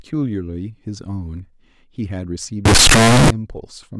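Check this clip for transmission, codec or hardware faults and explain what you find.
One fault here. From 2.65 to 3.30 s the speech turns into loud, harsh distortion, quiet bits as loud as everything else. Likely signed and unsigned mixed up: 16-bit samples read with the top bit flipped, so each zero crossing jumps across the full range.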